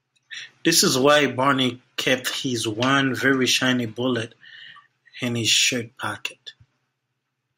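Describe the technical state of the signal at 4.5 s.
At 4.5 s the speech signal is intact, with no audible fault at that point.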